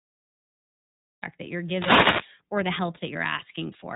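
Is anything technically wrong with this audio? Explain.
Yes. The whole clip runs through the iLBC codec, and the damage is plainly audible. It's a narrowband VoIP codec, and this one works in 30 ms frames at about 13.33 kbps, coding each frame's excitation on its own. Nothing gets through above 3.8 kHz, so the speech comes out band-limited, a bit rough and synthetic.

There's also a cut-off start. The first 1.23 s is digital silence, and then the audio comes in abruptly at 1.23 s, right before "that you're". Whatever was capturing it started late and landed mid-sound, so there's no natural attack or fade-in.

Then from 1.6 s to 2.36 s, between "that you're" and "or the help", you get a wireless microphone noise hit. The FM radio link faded as reflections cancelled each other out, so the receiver noise came up and you hear a burst of static over the speech.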